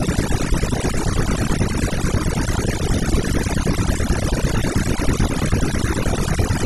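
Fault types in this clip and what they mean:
overdone noise removal: Noise reduction was pushed too hard across this speech. Background drops and breaks up into twinkling specks.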